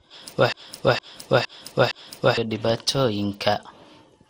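From the start, the speech has a swirly, smeared, hollow quality, and consonant attacks blur. There is nothing above about 16.6 kHz. This is generation loss, likely from the sound being decoded and re-encoded with a lossy codec around fifteen times. Each pass quantised the signal again on a shifted frame grid, so noise stacked up. The character fits MP2 at about 96 kbit/s, but sounds worse than that rate alone would give.

At 0.52 s a broken-record loop begins and runs to 2.37 s. A fragment 0.46 s long plays four times, back to back, each repeat identical. The likely cause is a stall in the player or stream, which kept resending the last piece it held. Whatever should have played across those seconds is missing. Normal audio resumes only after 2.37 s.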